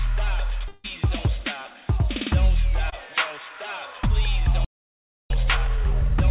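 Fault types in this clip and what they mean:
Long network dropout: From 0.68 to 0.86 s, roughly 160 ms of audio goes missing, likely because nothing arrived over the network. The receiver papers over almost all of it by stretching the last sound into a fading buzz or hiss, so there's no real silence, just a smeared patch.
Short concealed packet loss: Around 2.90 to 2.94 s, a 20 ms chunk never reached the decoder in time. The receiver filled it by carrying the previous sound forward and blending back in, so you get a tiny smear or wobble rather than a gap.
Playback stall: At 4.65 s the output just stops mid-flow and stays quiet until 5.30 s, about 0.65 s in all. That's likely the player running dry or its thread getting blocked. Meanwhile the G.711 call path caps everything at 4 kHz.
Time-compressed catch-up: Right after the stall, from 5.30 s to the end, the player works off its backlog by snipping out small pieces and cross-fading them. 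The audio runs about 1.25 times faster at unchanged pitch.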